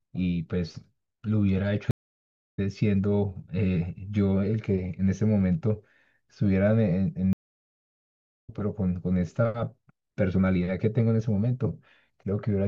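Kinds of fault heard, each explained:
Stream reconnect: the connection dropped, playback went silent, and a new decoder started partway through the stream, so the speech resumes from a later point rather than where it stopped. It happens twice: a silence of about 0.65 s from 1.91 s, after which roughly 0.4 s of speech is skipped, and a silence of about 1.13 s from 7.33 s, after which roughly a second is skipped. Each restart fades in over its first frame.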